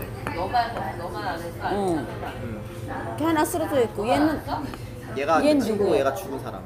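Listening to these everyday sounds, nothing stood out as a technical problem.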